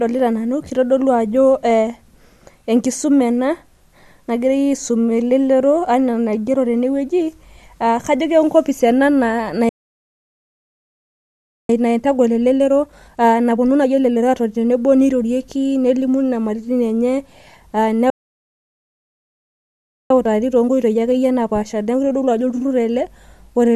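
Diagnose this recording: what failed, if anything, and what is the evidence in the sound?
The playback stage stalled twice. The speech stops mid-flow at 9.69 s and stays silent until 11.69 s. It stops again at 18.1 s and returns at 20.1 s. Each gap lasts 2 s. This is a playback stall. The likely cause is that the player ran out of buffered data or its thread was blocked. Output stayed silent until the player recovered. The speech then resumes.

Each stall is followed by time-compressed catch-up in the same playback stage. From 11.69 s to 14.69 s the speech runs at 1.25 times normal speed. From 20.10 s to 23.10 s it runs at 1.1 times. Pitch stays normal in both stretches, so this is not simple resampling. The player drains its backlog by removing short slices of audio and cross-fading across the joins. That is why the speech sounds hurried.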